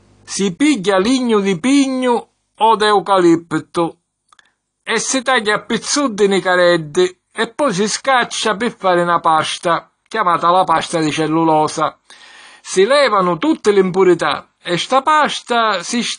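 Throughout the speech, nothing above 10.1 kHz survives and sibilants warble and fizz, likely AAC compression; that warble rules out a simple low-pass filter.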